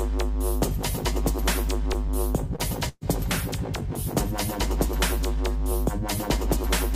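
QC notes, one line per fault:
2.55–2.62 s, short stall from a late packet: the jitter buffer ran dry, so the last sound gets stretched about 32 ms, nothing lost, just held too long.
2.89–3.04 s, burst of packet loss: roughly 127 ms of concealment fades the held sound, dips to about 30 ms of silence, then resumes with 60 ms missing.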